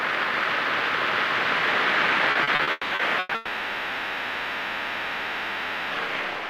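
From 2.31 s to 3.34 s there is repeated packet loss, heard as a choppy stutter. Seven separate holes open up in this stretch, the longest about 200 ms, and each is patched by stretching out the sound just before it. Those patches make up half the span, roughly 520 ms, so the result sounds choppy, with pieces missing. What sets this apart from a single long dropout is that real audio keeps breaking through between the gaps.

Immediately after, from 3.35 s to 5.94 s, the audio gives way to one unbroken stretch of fading continuation, a buzz or hiss, lasting about 2.56 s. None of the original sound returns, and there is no silence at any point. The likely cause is a long network dropout, with the receiver filling the entire hole by extending the last sound it had. Unlike the stutter before it, nothing real interrupts the fill until the audio resumes near 5.94 s, without the part that was lost.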